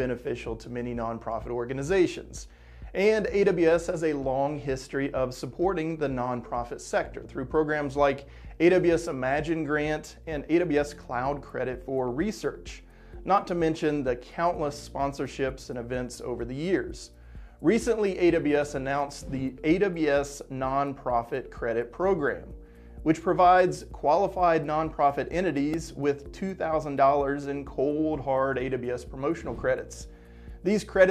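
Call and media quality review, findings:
Repeated buffer, 12.71 s: brief click, a stale block of about 1.5 ms played once more with a hard join at each edge. Fits a 64-sample buffer underrun at the output device; fresh audio missed its deadline, so the last block was replayed.

Repeated buffer, 25.74 s: same click, slightly longer, the block sounding twice extra, so around 3 ms of audio replaced. Same small-buffer underrun at the playback stage.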